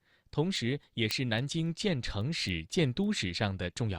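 Word clock ticks run from 0.28 to 3.87 s: around fifteen sharp, uneven ticks roughly every 0.3 s, each a single slipped sample, fitting clocks about 70 ppm apart.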